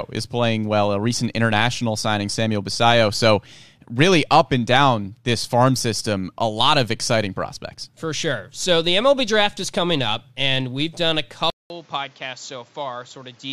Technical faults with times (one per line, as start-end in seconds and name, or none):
11.50-13.52 input switched to a poorer device